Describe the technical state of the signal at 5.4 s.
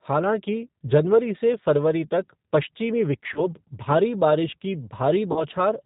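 At 5.4 s you're right inside a stretch of VoIP packet loss concealed by the speech codec, running from about 5.32 to 5.44 s, just after "भारी बारिश की". Roughly 40 ms of audio went missing, which fits a couple of dropped packets. The decoder filled the gap by carrying its last pitch and filter forward with gain falling frame by frame, so you hear a short stretched sound that sags, and the sound stays a bit weak and off for a moment after real data resumes.

Underneath that, the whole clip carries plainly audible G.729 codec damage, and the sound points to the 8 kbit/s G.729A variant. That codec doesn't send the waveform. It rebuilds speech from a vocal tract filter, a pitch predictor and a handful of pulses per 10 ms frame, and cuts everything above 4 kHz. So at this moment the speech is band-limited and muffled on top, with a rough, slightly synthetic edge.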